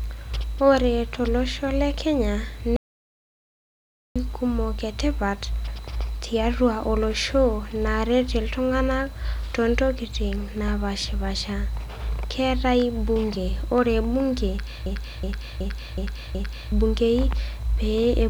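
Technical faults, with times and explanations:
2.76–4.16 s, audio dropout to silence: the speech cuts off abruptly and returns just as abruptly about 1.39 s later, with nothing in between, not even room tone. That dead silence means the recording chain kept writing silence while no signal reached it. The likely cause is a brief loss of the input, such as a disconnected device, a failed link or a momentary mute. Whatever was said during the gap is unrecoverable.
14.86–16.72 s, system hang loop: one fragment of about 0.37 s repeats identically five times, producing a stuttering, jammed-record effect at roughly 2.7 repeats per second. That loop length fits a 16384-sample buffer. This happens when the computer or driver stalls while the sound hardware keeps replaying the same ring buffer. Because the buffer is fairly long, it sounds like a choppy repeated snippet rather than a buzz, and around 2 s of the real speech is lost behind it.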